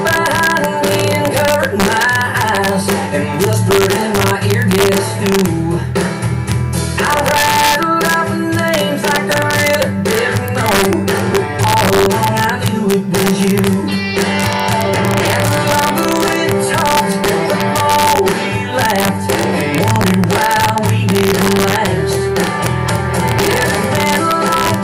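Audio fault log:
Throughout, integer overflow: gain about 3 dB too hot wraps the loudest peaks, a fraction of a percent, to the opposite sign. Harsh cracks result, and the waveform shows full-range flips, with broadband vertical streaks on a spectrogram.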